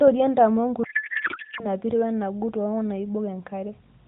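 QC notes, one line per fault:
0.84 to 1.67 s, codec payload misread: speech collapses into garbled, warbling noise that barely tracks it, because octet-aligned AMR frames are unpacked as bandwidth-efficient, shifting every field.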